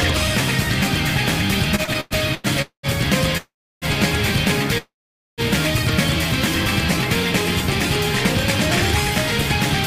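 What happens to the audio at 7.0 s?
Nothing goes wrong at 7.0 s; the audio runs through that moment intact, with no dropout, click or other audible fault.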